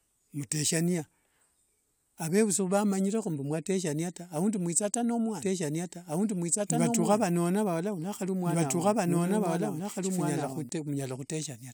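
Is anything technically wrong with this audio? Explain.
Yes. From 5.41 s to 10.69 s the speech is heard twice, a second copy trailing about two seconds behind at roughly the same loudness, dry and full-band, starting and stopping abruptly. This doubled audio track likely comes from a second capture path or misaligned edit.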